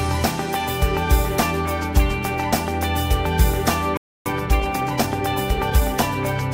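At 3.97 s the sound stops dead and stays silent until 4.26 s, a playback stall of about 287 ms, most likely because the player ran short of buffered data. The waveform shows a flat gap, and the spectrogram shows a clean vertical band with no energy across any frequency.

From 4.26 s to 6.16 s comes time-compressed catch-up. The player removes and cross-fades small slices to clear its backlog, so the sound runs about 1.15 times fast at unchanged pitch. Spectrogram features look horizontally squeezed, and the waveform shows slightly irregular joins.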